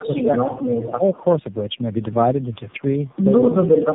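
Throughout, the call has passed through three speech codecs in a row, iLBC and then AMR-NB at 7.4 kbit/s twice, with G.711 links between them. Each border decoded the audio and coded it again, so every coder worked on the last one's damage. This tandem speech coding leaves the speech rough, muffled and warbly, with nothing above 3.7 kHz.

From 0.00 to 0.52 s, the echo canceller likely could not separate this talker from loudspeaker echo while both sides spoke at once, so it turned the near speech down. This speech suppression in double talk dips the level by up to about 15 dB, in patches adding up to roughly a third of a second.

Between 0.72 and 0.85 s there is an echo leak. The loudspeaker side's echo canceller likely left part of its loudspeaker pickup in the microphone signal, and it was sent back. A faint copy of the speech follows 147 ms behind, at about 25 dB below the main level.

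From 0.84 to 1.04 s, the speech is again suppressed in double talk, likely by the echo canceller clamping down while both sides talked. The level drops by up to about 15 dB over roughly a fifth of a second. From 3.52 s to the end, the same likely cause returns more strongly. The speech sinks by up to about 20 dB across about half a second.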